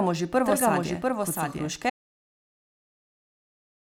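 From the start, the speech is heard twice. This is a doubled audio track. A second full-band copy trails about 0.7 s behind, roughly 5 dB quieter, with no added reverberation. Likely the signal was captured again through a slower path.

At 1.90 s, just after "kot so", the audio drops out to silence and stays silent to the end. The gap is silent, with no room tone. The input was likely lost while recording continued writing silence.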